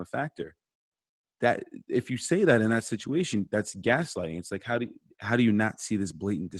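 No technical faults can be heard anywhere in the speech.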